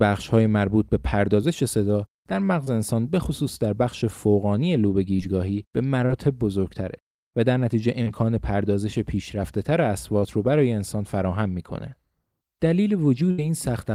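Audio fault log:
2.64, 5.16, 6.06, 8.03 and 10.20 s: short concealed packet loss. Each time about 20 to 40 ms of speech arrived too late to decode, and the receiver filled the gap by extending the preceding sound before blending back, leaving a brief smear or wobble.
13.31 to 13.39 s: burst of packet loss. Roughly 70 ms went missing in one run. The receiver stretched the last sound across the gap and faded it, so a held buzz or dying hiss replaces that stretch and the speech resumes further along.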